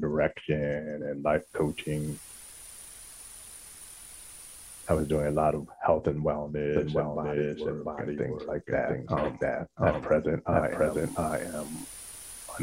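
At 6.76 s a doubled audio track begins and runs to the end: a second, equally loud copy of the sound trails the original by roughly 0.7 s, starting abruptly and with no decay or room colouring. It is likely a second capture through a slower path.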